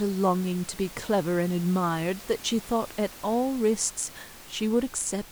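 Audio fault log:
Nothing to log here; the speech comes through without any system problems, with just the room's own background noise sitting about 19 dB beneath it.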